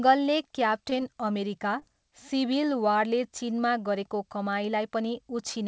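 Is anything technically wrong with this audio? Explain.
Yes. Short concealed packet loss occurs twice in this speech, at 0.90 to 0.93 s and at 1.79 to 1.84 s. About 20 ms of audio arrived too late to decode each time. The receiver covered the gap by extending the preceding sound and then crossfading back, so each spot is heard as a brief smear or wobble, and a short consonant may drop out.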